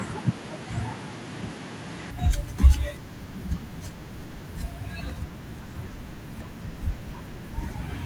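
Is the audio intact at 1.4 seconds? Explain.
No. From 0 to 2.11 s the speech has nothing above 11.4 kHz, sits about 5 dB quieter and carries a faint new noise floor. This likely comes from the input switching to a poorer device with a narrower band. The sound clears at 2.11 s without a gap.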